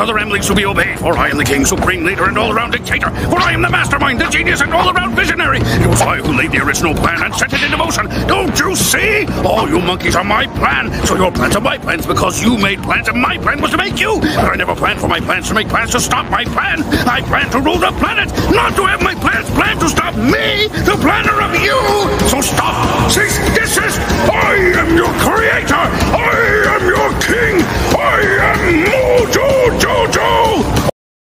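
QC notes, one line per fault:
Throughout: gain pumping. The gain swings by roughly 10 dB around each loud sound, squashing loud and soft parts together. Likely an input gain set far too high, with a fast limiter clamping it. The waveform shows a flattened, dense envelope.
30.90 s: cut-off end. The sound stops mid-event and drops straight to digital silence with no decay, because the final buffers were never written or played. On the waveform the trace ends abruptly into a flat line; the spectrogram shows a vertical wall with nothing after it.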